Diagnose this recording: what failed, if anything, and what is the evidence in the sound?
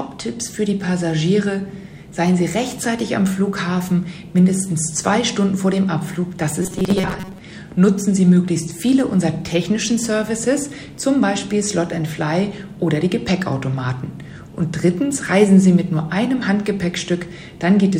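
Between 6.63 and 7.38 s the sound collapses into a rigid, metallic buzz fixed at 188 Hz, the signature of robotic sound from repeated short buffers. This points to the driver or buffer stage: the likely cause is audio arriving too seldom, so a segment of about 5.3 ms is replayed to fill the gaps while roughly half the real signal is skipped. Unlike mains hum, the 188 Hz tone matches the replayed segment's period rather than 50 or 60 Hz. Unlike a dropout, there is no silence, only the looping.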